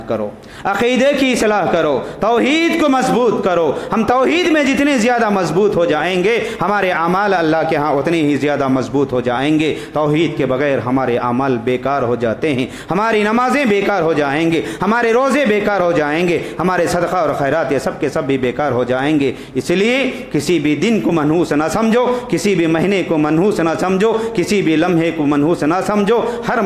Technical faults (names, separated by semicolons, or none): none